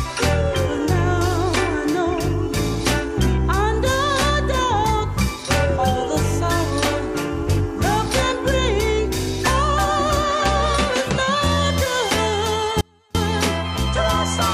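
At 12.81 s the sound drops out abruptly for about 336 ms, returning at 13.15 s. This is an audio dropout to a faint residue. The gap still carries a faint leak of the sound, roughly 35 dB down. The likely cause is a momentary loss of the signal while the downstream path stayed live.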